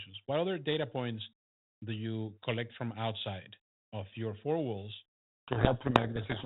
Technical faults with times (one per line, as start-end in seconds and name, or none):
5.48-6.45 codec payload misread